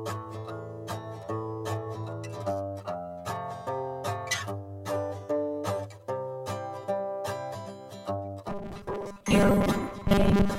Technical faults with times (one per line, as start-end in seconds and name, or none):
8.49-10.58 robotic sound from repeated short buffers